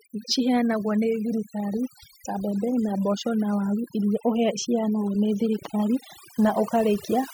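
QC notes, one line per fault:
Throughout: overdone noise removal. The noise reducer is working far too hard on this speech, pulling individual frequency bands down or out entirely whenever their level sits close to what it takes to be noise. Between phrases the floor collapses into near silence scattered with twinkling, chirpy specks where isolated bands flicker on and off, and the quieter parts of the voice are stripped along with the noise.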